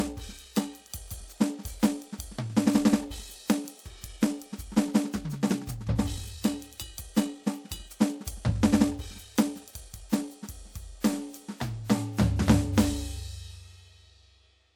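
A time-stretched section runs from the start of this music clip to 10.5 s: the pace is rushed at about 1.6 times normal speed while pitch holds steady, then returns abruptly to normal. The likely cause is software squeezing the passage to fit a length by dropping short pieces.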